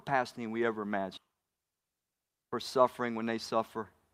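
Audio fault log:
1.17–1.19 s, skip ahead: Right after "than we ever", playback jumps forward with no gap and no fill. Roughly 0.7 s of speech is missing, and the audio on either side of the cut is joined almost directly. This points to a stretch of packets being discarded, on the way or by an overfull jitter buffer, while later audio was already queued. That cuts the playout delay by about the same amount, so the phrase lurches ahead abruptly.
1.27–2.30 s, jitter buffer speed-up: Speech runs at about 112% of normal rate for roughly one second while pitch stays unchanged, so the delivery sounds hurried and clipped. The receiver was holding more audio than its target delay and trimmed it by repeatedly cutting out short segments of one or a few pitch periods. In total roughly 150 ms was removed. Because whole pitch cycles are dropped rather than resampled, the tempo rises without any shift in pitch.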